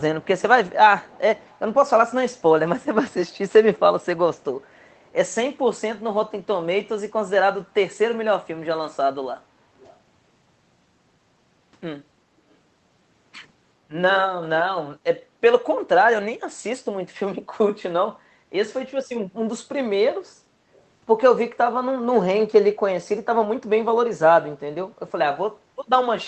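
From 1.01 to 1.6 s, a faint, delayed copy of the speech trails the original by about 411 ms, most likely an echo leak from a loudspeaker the far end's echo canceller didn't fully remove. Unlike reverberation's smooth tail, it's a separate, distinct repeat.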